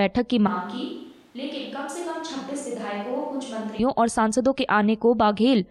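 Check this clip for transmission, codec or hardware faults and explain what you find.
A switch to a distant microphone runs from 0.48 to 3.79 s: the speech turns suddenly roomy and thin, about 10 dB quieter, with room noise roughly 30 dB down, likely because the close microphone dropped out. Unlike a simple level drop, the tone and reverberance change too, snapping back abruptly.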